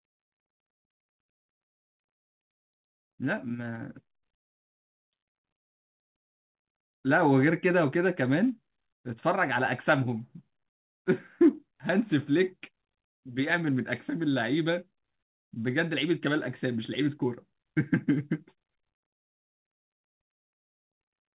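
The speech arrives over a normal call path whose narrowband codec leaves nothing above 4 kHz, consistent with G.711 mu-law, and no faults can be heard in it.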